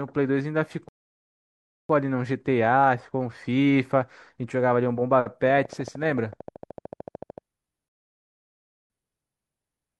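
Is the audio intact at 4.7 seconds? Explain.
Yes, the speech at 4.7 seconds plays through intact, with no audible fault at that moment.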